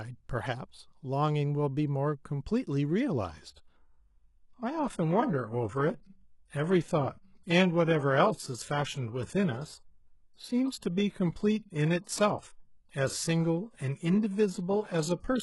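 At 3.49 s the speech drops abruptly to a lower-bitrate version of an adaptive stream and stays there to the end, with no gap at the switch. The sound fits a move from AAC-LC near 96 kbit/s to HE-AAC near 12 kbit/s. The treble turns synthetic and codec artefacts rise.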